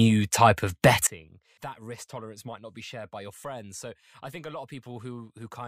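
At 1.07 s the speech and its background noise drop together by about 21 dB in a single step and stay that low to the end. This sudden gain jump likely comes from a gain setting applied instantly, with no ramp between samples.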